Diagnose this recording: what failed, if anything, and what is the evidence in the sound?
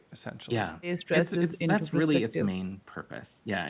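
Nothing in the recording points to a failure: the speech arrives through a call path whose band ends at 4 kHz, which fits narrowband G.711 A-law coding at 64 kbps, and no stage of the chain shows a problem.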